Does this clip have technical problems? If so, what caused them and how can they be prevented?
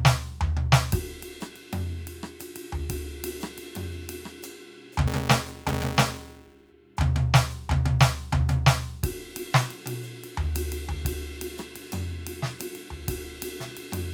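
Yes. From 5.07 to 6.73 s the music carries a 345 Hz buzz from a filter restarted on every block, which fits a 128-sample block. Each block starts from silence and ticks. Unlike mains hum, the buzz rises and falls with the music's level. Preserving filter state across blocks prevents it.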